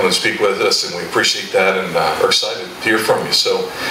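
Throughout the clip the gain is pulled down under each loud sound, a swing of around 20 dB, leaving loud and soft parts squashed together. This gain pumping is likely from input gain set far too high, with a fast limiter clamping down on every peak.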